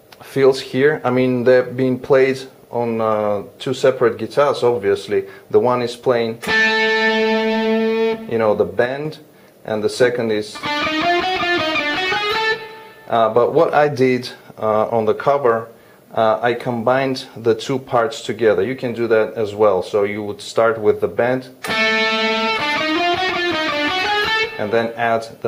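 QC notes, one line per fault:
8.86–9.05 s, one channel drops out: for about 0.19 s the level falls abruptly by about 6 dB, then snaps back. The likely cause is one stereo channel briefly going silent, so the mono sum carries only half of the shared signal.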